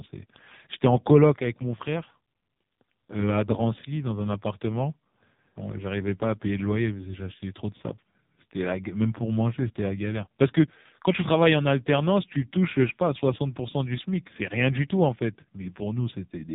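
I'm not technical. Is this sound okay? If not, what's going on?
No. The whole clip has been squeezed through the AMR narrowband mobile codec, the old phone-call format. Everything above about 3.8 kHz is gone, so the speech sounds muffled, and heavy compression makes it buzzy and robotic, like a poor mobile connection.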